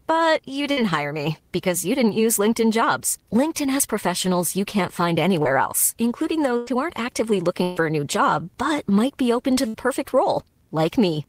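Bursts of packet loss occur at 0.71, 6.57, 7.63 and 9.68 s. About 60, 100, 140 and 60 ms go missing. The last sound is stretched and faded over each gap, then the speech jumps ahead.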